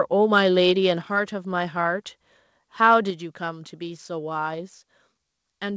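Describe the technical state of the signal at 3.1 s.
At 3.1 s the speech level drops suddenly by about 4 dB. This is likely a microphone volume stepped down by the call software's automatic input control.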